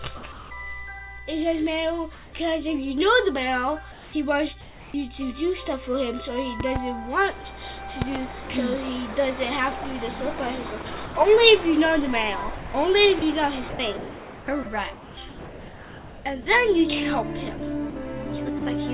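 Right at 0.17 to 0.23 s, about 50 ms of sound gets cut and swapped for steady hiss, likely the voice detector dropping it as background. That comfort noise in place of the background carries on to 0.5 s, and returns at 2.15 to 2.33 s, about 7 dB quieter, and again at 3.92 to 4.94 s. It's flat, detail-free synthetic noise, likely filling pauses the sender stopped transmitting.

Two loud pops come at 6.60 to 6.78 s and 8.02 to 8.18 s, each a quick double thump over the sound, roughly 10 and 15 dB above it. The likely cause is a voltage spike from a plug, switch or glitch.

Then the sound gets chopped by the voice detector at 10.82 to 11.15 s, across 12.56 to 16.46 s, with about 2 s replaced in that stretch, and at 17.57 to 17.96 s. The detector likely kept toggling, so bits vanish into comfort noise.

Finally, 18.59 to 18.62 s loses another 30 ms, likely the same way.

Through all of it, nothing comes through above 4 kHz, which points to a narrowband call codec such as G.711.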